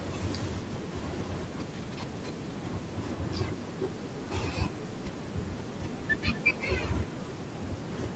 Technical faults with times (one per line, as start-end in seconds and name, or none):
0.00-8.15 echo with no canceller